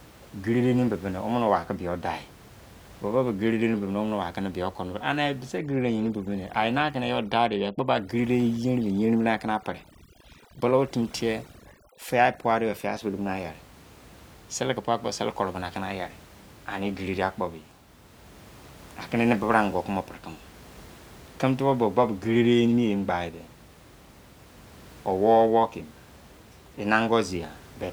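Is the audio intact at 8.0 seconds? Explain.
No. Overdone noise removal runs from 5.59 to 13.01 s: the noise reduction was set too strong, switching off frequency bands close to its noise estimate, including quiet parts of the speech. The room noise, about 24 dB below the speech, drops and breaks up into twinkling specks.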